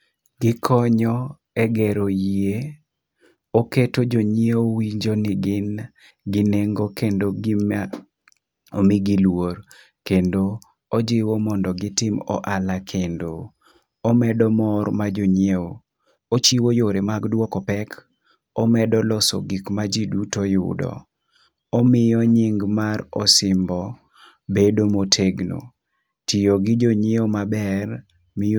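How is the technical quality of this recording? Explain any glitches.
The recording has one glitch, a time-stretched section. From 15.23 to 17.93 s the speech runs 1.35 times faster, likely from software squeezing it by dropping short slices. It sounds rushed, yet the pitch stays put, unlike a plain speed-up.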